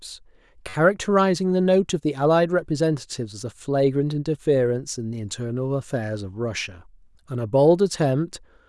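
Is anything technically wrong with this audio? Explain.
Yes. From 0.69 to 0.74 s there is a repeated buffer. Fresh audio arrived late, so one roughly 10.7 ms block, which fits a 256-sample buffer, played four extra times. It sounds like a brief buzzy stutter. The waveform shows identical copies with hard joins, and the spectrogram shows thin vertical lines at each seam.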